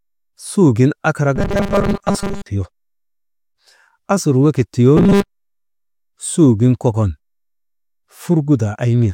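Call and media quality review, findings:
Robotic sound from repeated short buffers, 1.36–2.48 s and 4.97–6.00 s: fixed 200 Hz buzz; likely starved playback looping a 5 ms chunk.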